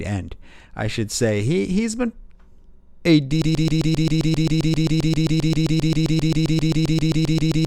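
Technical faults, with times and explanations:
3.42 s to the end, broken-record loop: a 132 ms slice of speech repeats exactly, back to back, about 32 times until the clip stops, so whatever should have followed is gone. Likely the player or stream stalled and kept resending its last buffered fragment.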